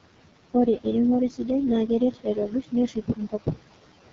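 From the start, noise suppressor artifacts run through the speech: the room noise, about 14 dB below the voice, is pushed down by about 17 dB in the pauses and swells back under each phrase. A spectrogram shows the noise floor pumping between dark gaps and grey bands tied to speech activity.

The whole clip is also carried by the AMR wideband (HD Voice) codec, and the heavy damage fits its lowest rate, around 6.6 kbit/s. The vocal tract model is starved of bits, so the speech sounds rough and raspy. On a spectrogram nothing reaches above 7.6 kHz, and the top band looks like smeared noise rather than clear harmonics.

Between 2.12 and 3.58 s comes speech cut by the noise suppressor. It mistook quieter speech for background and turned it down by as much as about 15 dB, a bit under half a second in all, so those parts sound swallowed and faint. The waveform shows short, sudden dips in the speech envelope there.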